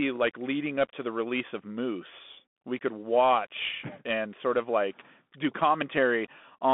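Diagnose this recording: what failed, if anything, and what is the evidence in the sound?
The failure is at the codec stage: the speech runs throughout through a Bluetooth CVSD headset codec. Nothing passes below about 200 Hz or above 3.5 kHz, s sounds are scratchy, and a granular hiss sits under the speech. That hiss and the overload on loud high sounds set it apart from a clean telephone band-limit. One-bit up-or-down steps, fitting a 64 kbps CVSD link, cannot follow fast high-frequency swings.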